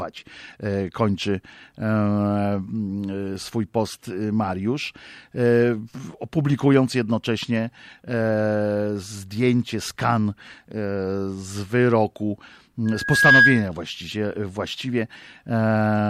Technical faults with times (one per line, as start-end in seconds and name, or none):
12.85-13.69 loudspeaker feedback squeal